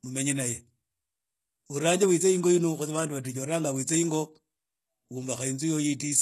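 Throughout the speech, s sounds turn gritty and lispy with a metallic edge, and nothing extends above 12.3 kHz. This is likely HE-AAC compression rebuilding the treble from copied lower bands, which fits a bitrate near 16 kbps. A spectrogram shows blurred, duplicated upper-band patterns under a flat ceiling.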